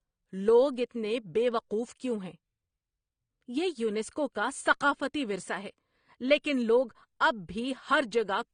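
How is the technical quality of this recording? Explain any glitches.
The quality is held back by one problem that runs through the whole clip: the speech has nothing above about 9.7 kHz, so it sounds dull and closed-in at the top. That fits low-bitrate audio saved at a high bitrate, likely an earlier encode at around 32 kbit/s later saved again as a much larger MP3. The bigger file can't restore the detail that the first, heavily squeezed encode discarded, so the missing top end stays missing.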